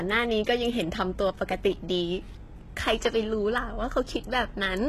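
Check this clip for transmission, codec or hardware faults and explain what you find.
One fault runs through the whole clip: the speech is coded with plainly audible damage. The treble sounds bright but synthetic, with gritty, lispy s sounds and a metallic edge in the upper range, and nothing at all above 12.3 kHz. This is likely HE-AAC compression at a very low rate, which fits roughly 16 kbps. The codec keeps only the lower spectrum and fills the top by copying lower bands upward under a coarse envelope, so the rebuilt harmonics don't line up with the real ones.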